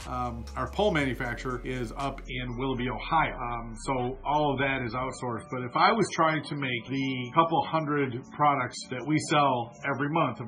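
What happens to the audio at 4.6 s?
At 4.6 s the audio is inside a stretch of adaptive stream at a lower bitrate, running from 2.25 s to the end of the clip. The stream has switched to a much cheaper encoding, and the coarse, swirly texture suggests something like a 16 kbit/s MP3 standing in for a far richer version. Nothing survives above 10.3 kHz, so the top end sounds dull, and codec artefacts sit audibly on the sound. The drop arrives abruptly, with no gap.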